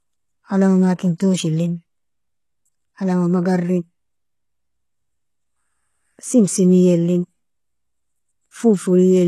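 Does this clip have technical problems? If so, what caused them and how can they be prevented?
Yes. Throughout the speech, heavy HE-AAC compression rebuilds treble from copied lower bands, likely at a bitrate near 16 kbps. S sounds turn gritty, and a spectrogram shows repetitive upper bands ending at 12.3 kHz. To prevent it, encode at a higher bitrate with a full-band codec.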